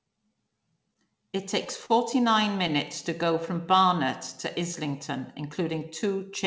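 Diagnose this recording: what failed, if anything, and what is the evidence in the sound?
Network jitter buffer: a short stall from a late packet at 1.86 to 1.91 s stretches the sound 38 ms, nothing lost. The spectrogram shows harmonics frozen flat.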